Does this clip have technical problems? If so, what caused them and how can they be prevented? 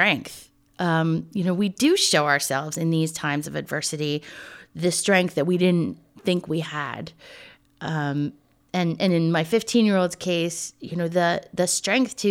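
Yes: word clock ticks, roughly once per second from 0.94 to 11.79 s, as the unlocked receiver slips one sample per drift cycle at about 30 ppm. Prevent it by slaving the receiver to the sender's clock.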